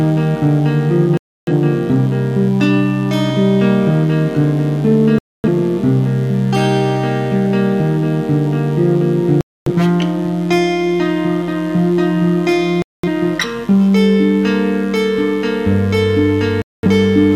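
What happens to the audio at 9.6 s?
At 9.6 s the sound is inside a digital broadcast dropout running from 9.41 to 9.72 s. The receiver lost valid frames and muted until good ones returned, so the audio drops to silence and resumes later in the programme, with the missing stretch gone. That fits roughly six lost frames. Unlike a simple fade or level dip, nothing bridges the gap: what was sent during it never comes back.

Under the gap's edges, and throughout, there is mains buzz at about 25 dB below the signal. Sharp switching spikes on the 50 Hz supply add a dense stack of harmonics reaching several kilohertz. That gives a raspy, edgy buzz rather than the smooth, low tone of plain 50 Hz hum.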